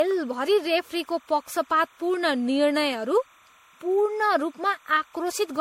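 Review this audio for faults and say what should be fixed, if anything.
A steady chirping warble of timecode bleed runs behind the speech for the whole clip, sitting about 35 dB below the speech. It alternates between pitches around 1 kHz and 2 kHz in a pattern that fits 29.97 frames-per-second linear timecode. That points to LTC from an adjacent track, cable or connector coupling into the audio path, so the two-tone square wave rides under everything as a constant low-level chatter. To prevent it, route timecode on separate, well-shielded cabling away from audio lines and keep it off neighbouring recorder tracks.

The speech also sounds swirly, smeared and hollow throughout, with blurred consonant attacks. The degradation is heavier than a single lossy encode would produce. Its likely cause is generation loss: repeated decoding and re-encoding, roughly seven passes, with a character that fits MP3 at around 64 kbit/s. 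Each pass requantises on a shifted frame grid, so the noise and the spectral holes accumulate. To prevent it, keep the audio in a lossless format through editing and transfer, and encode to a lossy format only once, at the final delivery stage.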